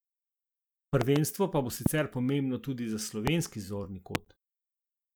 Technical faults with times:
1.01-1.18 loud pop
1.86-1.88 loud pop
3.27-3.30 loud pop
4.15-4.17 loud pop

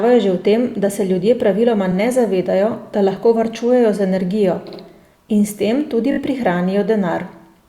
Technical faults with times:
1.91-1.95 repeated frames
4.67-4.79 repeated frames
6.11-6.18 repeated frames

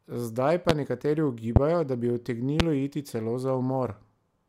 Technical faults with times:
0.69-0.72 loud pop
1.56-1.59 loud pop
2.60-2.63 loud pop

